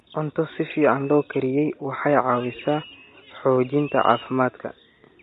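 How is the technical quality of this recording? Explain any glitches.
The technical quality is held back by plainly audible codec damage across the whole speech clip, with faint room noise sitting about 47 dB below the voice.

Low-delay AAC compression is likely behind the rough, grainy texture. The voice sounds coarse and synthetic at the top, which fits AAC-ELD at a bitrate around 32 kbps. Its short frames smear the pitch harmonics and starve them of bits. On a spectrogram, the harmonic stripes look blurred, with noise filling the gaps between them and a thin, patchy upper band.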